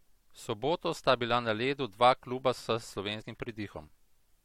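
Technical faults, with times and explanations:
3.21 to 3.23 s, damaged data in a compressed stream: a brief glitch cuts across the speech for about 20 ms. Corrupted bytes in the encoded stream mean the decoder cannot interpret the frame at that point, so it misreads or drops it, loses frame sync, and resumes only when it locks onto the next valid frame header.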